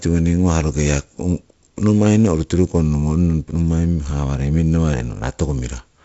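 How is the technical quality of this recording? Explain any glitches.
The technical quality holds up, with no glitches to explain in this wideband telephone speech.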